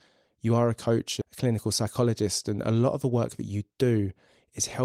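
At 1.21 s the speech lurches forward with no gap, about half a second missing: a skip ahead, where a stretch of audio was dropped, in transit or by the jitter buffer, while later audio was already waiting. From 1.85 to 2.23 s the speech sounds slightly hurried at unchanged pitch, running at 107%: a jitter buffer speed-up, trimming short pitch-period slices to shed a few tens of milliseconds of excess delay.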